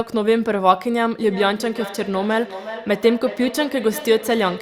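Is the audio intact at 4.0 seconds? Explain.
No. Feedback echo between two devices runs from 1.19 s to the end. A second device replays the sound into the first microphone, so it returns roughly every 400 ms at up to about 13 dB below the original, visible as evenly spaced, fainter copies in the waveform and spectrogram.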